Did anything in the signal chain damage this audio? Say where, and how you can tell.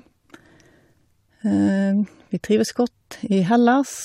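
Yes, damaged data in a compressed stream at the codec stage: brief disruptions at 0.93 s and 3.12 s, where the decoder lost frame sync, appear as narrow broadband smears on a spectrogram.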